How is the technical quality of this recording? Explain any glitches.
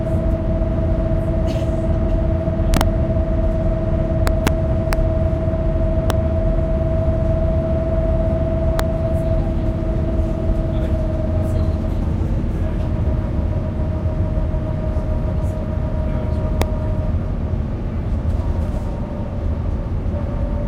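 The recording is marred by harsh, violent cracks on its loudest moments, sharper and more brutal than ordinary clipping. This is integer overflow. It occurs from 2.74 to 2.81 s, from 4.27 to 4.48 s, and as brief snaps at 4.93 s, 6.10 s, 8.79 s and 16.62 s. At each of these points the level pushed past the largest value the integer format could hold, by about 2 dB in the first event and about 1 dB in the rest. Instead of being held at the ceiling, those peaks wrapped around to the opposite extreme. Each wrap throws the waveform from full positive to full negative in an instant, and that jump is the crack.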